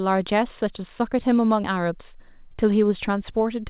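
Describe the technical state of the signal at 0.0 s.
At 0.0 s the speech signal is intact, carried through the call path with its narrowband sound and nothing above 4 kHz, and no fault is present at that moment.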